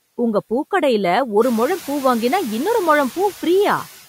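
From start to finish, a noise suppressor is working on the speech, pulling down each frequency band it judges to be steady background, frame by frame, by about 12 dB. The noise therefore drops away in the gaps between words and returns underneath them as the speech opens the bands again. This pumping becomes easier to hear after the room noise rises by about 14 dB at around one and a half seconds, settling about 19 dB below the speech.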